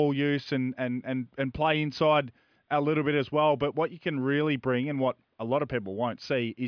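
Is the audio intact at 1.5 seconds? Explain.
Yes, the speech at 1.5 seconds is intact, with no fault audible at that moment.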